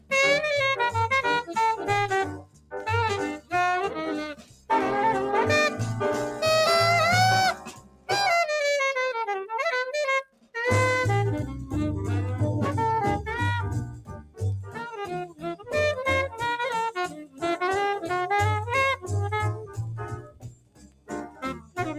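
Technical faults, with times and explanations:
Throughout: noise suppressor applied to music or sounds. A speech-oriented noise suppressor was left active on non-speech audio, so it keeps judging sustained, steady content as background noise and pulling it down while letting sharp onsets through. The result is a pumping, fluttering level that swings by roughly 15 dB, with held material and tails thinning out rather than sitting at a stable loudness.
1.42–2.81 s, 3.35–4.7 s, 7.54–8.1 s, 10.24–10.56 s, 13.96–15.73 s, 17.07–17.43 s, 18.96–21.78 s: sound cut by the noise suppressor. In each stretch the suppressor classed the ongoing sound as noise and attenuated it harder than elsewhere, by up to about 18 to 20 dB at the deepest point. Steady and decaying parts sink or get their fade chopped short, so the sound drops away for around 0.3 s to two seconds at a time, longest in the final stretch.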